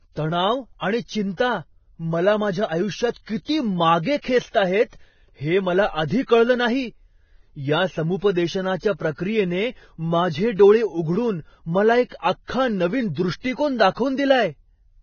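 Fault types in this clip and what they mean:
Vorbis compression: Nothing comes through above about 6.6 kHz, and the speech that remains has a grainy, hissy texture with roughened tones. That heavy damage is likely from Vorbis squeezed to a low bitrate, quantising detail so coarsely it turns to noise.
Pre-echo: Just after "मला माझ्या आयुष्यात", around 3.11 to 3.16 s, a short hiss runs about 56 ms ahead of a sharp onset, which comes out softened. The codec smeared its block's quantisation noise into the quiet gap before the attack.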